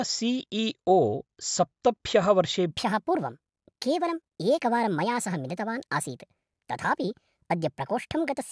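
From 2.71 s to the end, the speech suddenly sounds high and hurried, a classic wrong sample rate problem. It runs 1.38 times fast and sits about 5.5 semitones higher, which fits 16 kHz audio being played out at 22 kHz with no conversion.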